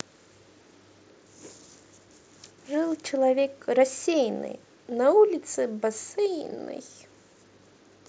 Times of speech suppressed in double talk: none

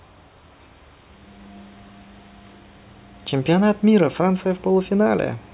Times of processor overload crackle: none

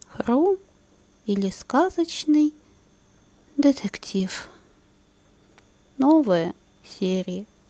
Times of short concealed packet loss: 4.17-4.21

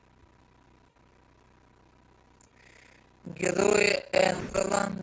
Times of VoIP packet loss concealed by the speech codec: 0.90-0.97, 2.47-2.52, 4.33-4.63

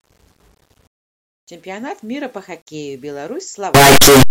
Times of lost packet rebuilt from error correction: none

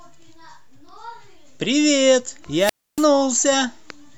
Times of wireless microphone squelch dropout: 2.56-3.08

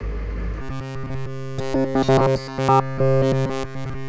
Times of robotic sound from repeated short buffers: 0.62-4.08

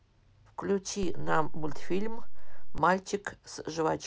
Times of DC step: 1.03-2.78

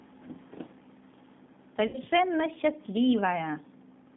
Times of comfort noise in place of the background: none

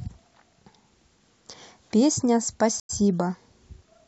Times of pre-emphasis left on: none

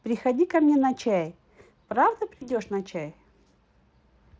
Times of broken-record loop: none

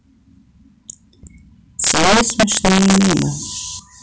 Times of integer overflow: 1.84-3.22

